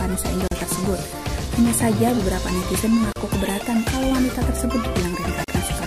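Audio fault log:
0.48–0.51 s, 3.13–3.16 s, 5.44–5.48 s: gap at a join of encoded pieces. The sound drops out three times for about 35 to 39 ms, with edges smeared by the codec, then resumes exactly where it stopped. Each dropout marks a join between separately encoded pieces that was never trimmed, so the encoder's start-up delay and the padding on the last frame of the previous piece remain as a short silence.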